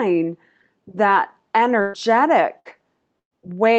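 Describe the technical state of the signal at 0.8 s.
At 0.8 s the speech signal is intact, with nothing beyond the ordinary coding character of the call path that carries it.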